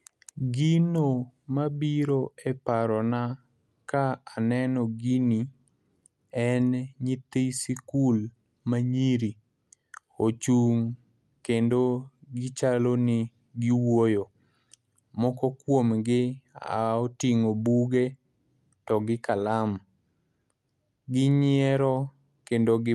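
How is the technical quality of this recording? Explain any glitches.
The technical quality of this recording is sound, and there are no glitches to explain.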